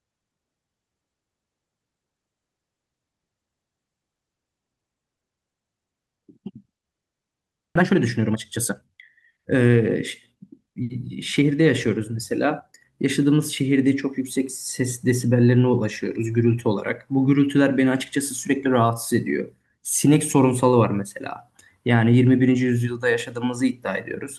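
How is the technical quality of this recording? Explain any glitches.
The recording has three timing faults, all clustered between about 7.8 and 10.9 seconds.

At 7.75 to 7.77 s the speech abruptly jumps forward, losing about a second with no gap. This is a skip ahead: a stretch of audio was dropped, either in transit or by an overflowing buffer, while later audio was already waiting.

From 7.79 to 9.77 s the speech sounds hurried at 121% speed, then again from 10.35 to 10.89 s at 110%, with pitch unchanged. This is jitter buffer speed-up: the receiver repeatedly trimmed short pitch-period pieces to shrink excess delay, removing roughly 400 ms and 70 ms.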